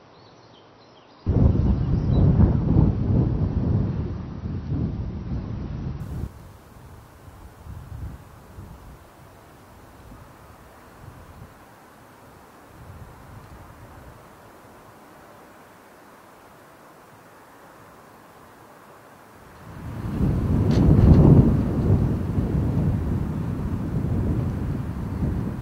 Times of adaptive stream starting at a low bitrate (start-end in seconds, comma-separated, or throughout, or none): 0.00-6.00